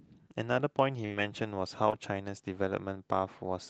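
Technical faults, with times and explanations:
1.05–1.12 s, burst of packet loss: about 48 ms of the last sound is stretched and fades, then 40 ms is skipped. This longer hold-and-jump distinguishes it from a brief smear.
1.10–1.20 s and 1.92–1.94 s, lost packet rebuilt from error correction: low-bitrate backup copies fill 60 ms, then 20 ms. There is no gap, only a rougher, noisier texture, consistent with three 20 ms frames and then one.
1.90–1.94 s, short concealed packet loss: about 19 ms is extrapolated from the preceding sound over a 20 ms hole. It is a quick smear or wobble, far shorter than the burst.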